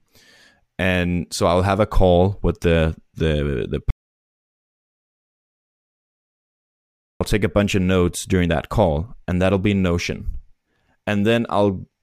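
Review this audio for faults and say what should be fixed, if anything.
The input feed to the recorder was likely lost, through a dropped device link, a loose connection or an accidental mute, while the recording carried on writing silence. The result is an audio dropout to silence from 3.91 s to 7.21 s, about 3.3 s long. The speech stops abruptly mid-flow and resumes just as suddenly, and the gap holds silence with no room tone. Whatever was spoken during that stretch is unrecoverable and needs to be re-recorded. To prevent this, secure the cabling and device connection, disable any mute control that can be triggered by accident, and monitor input levels live so a lost feed is caught at once.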